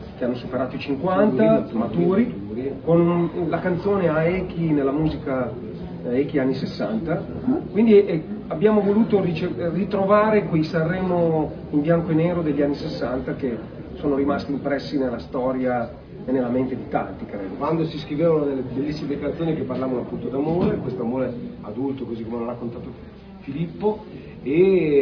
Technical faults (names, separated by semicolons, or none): none